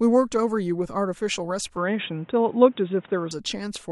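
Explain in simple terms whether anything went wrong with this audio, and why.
From 1.77 to 3.31 seconds the speech turns dull and boxy, with new background noise and nothing above 3.8 kHz. Likely cause: input switched to a poorer device.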